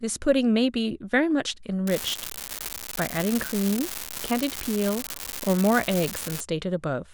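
From 1.87 to 6.41 s an unreliable data bit flips randomly, adding equal spikes of about -12 dBFS: steady crackle through pauses, broadband speckle on spectrograms, uniform-height waveform spikes.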